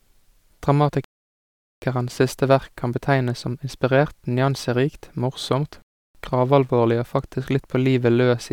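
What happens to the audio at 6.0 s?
At 6.0 s the speech is in the middle of a rebuffering stall, from 5.82 to 6.15 s. The player ran out of downloaded audio after "som inspirert nyanserikt morsomt" and fell silent. It then resumed exactly where it stopped, at "gravalvorlig og". Nothing is lost, but about 0.33 s of silence is added.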